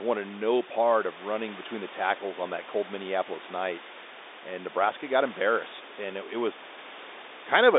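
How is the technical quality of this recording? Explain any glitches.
The technical quality holds up, with no glitches to explain.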